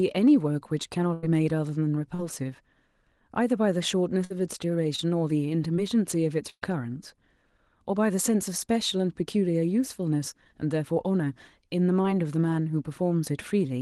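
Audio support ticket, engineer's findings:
Burst of packet loss at 1.13–1.24 s (about 100 ms gone), 4.24–4.32 s (60 ms) and 6.50–6.63 s (120 ms). Jitter buffer runs dry, so concealment holds the last sound and fades it: buzz or hiss, then a jump ahead. The 6.50 s one fades all the way to silence for about 40 ms before the audio comes back.

Short concealed packet loss at 2.14–2.20 s (40 ms), 4.96–5.00 s, 5.76–5.80 s and 12.02–12.06 s (20 ms each). Decoder extrapolates briefly and crossfades back, so you get a quick smear or wobble, and a consonant can get swallowed. These sit on top of the usual Opus coding noise, with the top end stopping around 12 kHz, which fits a 20 kbps call setting.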